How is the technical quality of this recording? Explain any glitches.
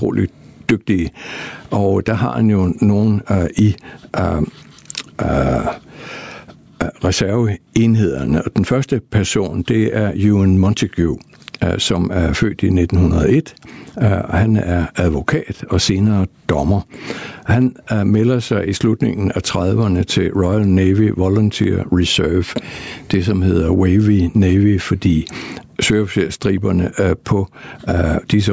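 The recording has one clear fault that runs through all of the speech. Gain pumping is present throughout, with swings of around 15 dB. The likely cause is gain set far too high and a fast limiter clamping down, which squashes the dynamics. On a waveform the envelope looks flattened, with the noise floor rising between phrases. The call microphone processing's band limit shows as an empty spectrogram above 8 kHz.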